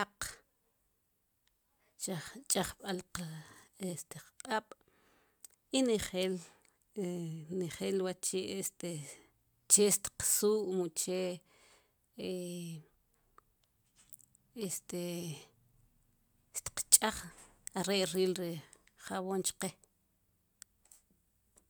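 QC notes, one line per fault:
No faults turned up anywhere in this one, so there's nothing to log for it.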